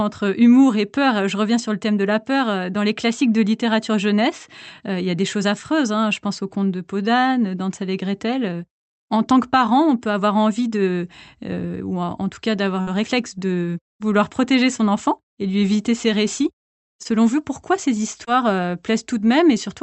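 French speech carried over a call path whose Opus coding limits the audio to about 8 kHz. At 12.81 to 12.89 s, a burst of packet loss left a gap that the receiver covered by extending and fading the preceding sound for about 53 ms. The audio then jumps ahead between "en tout cas d'avoir" and "réflexe de vouloir protéger", with about 60 ms missing. Short concealed packet loss occurs at 17.03 s, after "lui éviter ses récits", and again at 18.25 s, after "vous pourquoi ces". Each time, about 20 ms arrived too late and was replaced by a continuation of the previous sound, which is heard as a brief smear, with about 20 ms actually lost.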